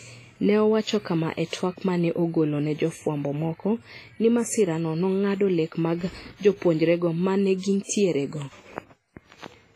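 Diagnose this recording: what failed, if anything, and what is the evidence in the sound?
Codec stage: the speech sounds washy and ringing throughout, with hiss that breathes with the signal and nothing above 15.5 kHz, likely WMA compression at roughly 24 kbps, unlike steady analogue noise.

Pre-echo at 7.83 s: about 59 ms of hiss precedes a sharp attack, as block-wide quantisation noise fills the quiet gap. Unlike a click, it smears rather than snaps.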